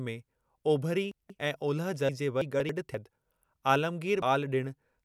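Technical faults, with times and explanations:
1.12 to 1.39 s and 2.42 to 2.69 s, chunks out of order: in each span a 93 ms chunk arrives late and plays after the two chunks that should follow it. The first comes between "में ओभिरी" and "ऐं ओलह". Nothing is missing, but the sequence is scrambled and it has three hard joins.
2.09 s, 2.94 s and 4.05 to 4.22 s, compressed frames skipped: whole coded frames are dropped, so the audio jumps ahead, about 0.3 s at the first two points and about a tenth of a second at the last. The first comes right after "में ओभिरी ऐं ओलह".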